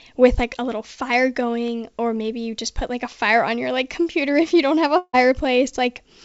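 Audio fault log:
4.98–5.15 s long network dropout: the sound stretches into a fading buzz for 0.15 s, then brief silence, likely from lost packets; the missing audio never returns.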